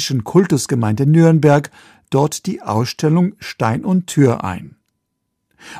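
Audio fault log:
0.37–0.39 s and 1.27–1.56 s, hard clipping: the speech peaks overran what a stage in the chain could pass, by about 2 dB in the first burst and about 4 dB in the second, so the waveform tops were sheared flat. Those squared-off peaks add harmonics high in the spectrum, heard as a brief crackle at 0.37 s and a longer, harsher fuzz on the loud sounds from 1.27 to 1.56 s.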